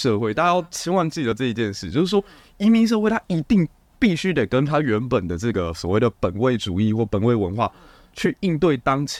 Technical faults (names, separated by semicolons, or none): compressed frames skipped